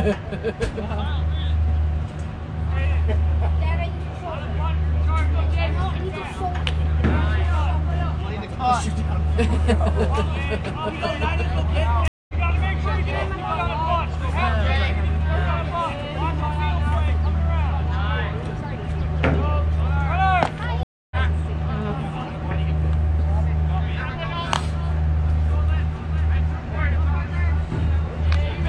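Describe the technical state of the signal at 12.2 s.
At 12.2 s the connection has dropped and a stream reconnect is under way. The player restarts its decoder mid-stream between 12.08 and 12.34 s. The sound cuts to 209 ms of silence, then resumes roughly a fifth of a second further on, skipping a short stretch.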